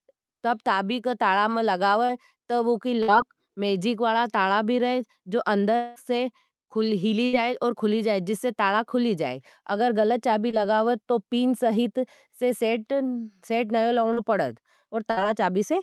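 At 2.05 to 2.11 s there is a short concealed packet loss. About 40 ms of speech never arrived in time. The decoder extended the preceding sound for roughly 32 ms, then blended back. It comes across as a brief smear.

At 3.03 to 3.10 s comes a burst of packet loss. About 60 ms in a row went missing. The receiver stretched the last sound and let it fade. You hear a short held buzz or hiss, and the speech picks up further on.

From 5.76 to 5.98 s, the sound turns into a drawn-out, fading continuation of the last sound lasting nearly 200 ms. It never drops to silence. This is likely a long network dropout, with about 200 ms of speech lost.

At 7.26 to 7.35 s there is a second burst of packet loss. About 80 ms is missing and roughly 72 ms is filled with a decaying continuation.

At 10.51 to 10.55 s, another short concealed packet loss replaces about 20 ms with a quick patch. It is heard as a small wobble.

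From 14.13 to 15.23 s, repeated packet loss gives a robotic sound. Three separate gaps total about 100 ms, the longest 56 ms. Roughly 9% of the stretch is patched, so the speech turns choppy with pieces missing. Throughout, the call codec limits the top end to about 12 kHz, which fits Opus at around 64 kbps.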